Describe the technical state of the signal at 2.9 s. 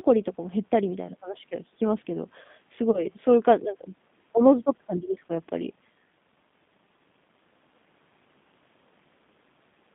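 Right there a VoIP packet loss concealed by the speech codec kicks in, 2.91 to 3.06 s. The decoder stretches its last pitch and filter over a 30 ms gap, so you get a fading smear that stays weak briefly after. It sits on G.729 coding throughout, 8 kbit/s with a 150 Hz to 3.6 kHz line band, giving that rough, synthetic edge.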